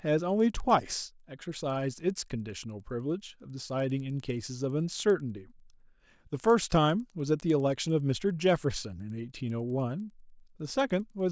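From start to finish the speech carries a resampler restarted on every block. The conversion treated each 100 ms block as a separate piece, with no memory of its neighbours. At every block edge the filter saw the wrong samples, so a small error lands there. The result is a steady ticking at 10 Hz, heard only while speech is present. It fits a conversion from 44.1 kHz down to 16 kHz.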